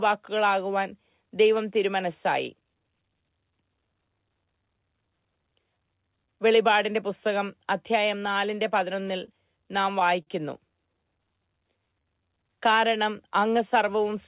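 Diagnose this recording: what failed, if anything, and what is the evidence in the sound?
Network first: scattered short gaps from 8.8 to 10.29 s, roughly seven lost packets, longest around 40 ms, each patched by extending the last sound.

Then a jitter buffer slow-down at 11.03 to 13.03 s: the receiver repeated pitch periods to rebuild its reserve, adding 103 ms, so speech drags at 95% speed, same pitch.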